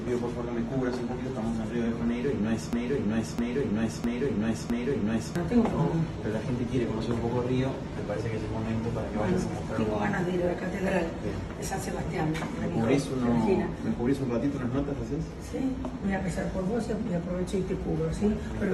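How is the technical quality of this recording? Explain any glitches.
There is one clear glitch, a broken-record loop. From 2.73 to 5.36 s, a 0.66 s fragment of the sound repeats exactly, back to back, four times. The likely cause is a player or stream stalling and resending its last buffered piece, so the audio due in that span is lost.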